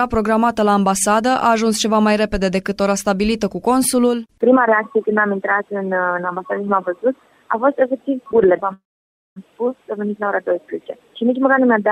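Packets were likely held up on the network long enough for the jitter buffer to run dry, producing a call audio freeze from 8.73 to 9.38 s. The receiver stretched the last sound into a brief fading tail, then about 550 ms of silence filled most of the 627 ms gap. When delivery resumed, the audio picked up exactly where it had stopped, with nothing lost, so everything after 9.38 s arrives about 0.63 s late.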